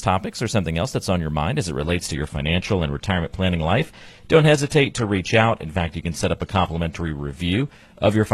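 At 1.82 s the speech quality drops suddenly, with no gap, and stays low to the end. This is an adaptive stream switching to a lower bitrate. Nothing remains above 12.4 kHz. That points to a move from about 96 kbit/s AAC to a 16 kbit/s HE-AAC stream.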